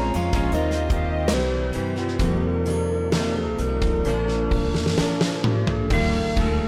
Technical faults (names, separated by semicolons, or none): section at the wrong speed